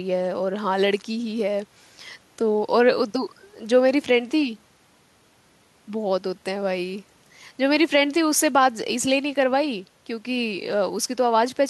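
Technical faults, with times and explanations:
No technical faults heard.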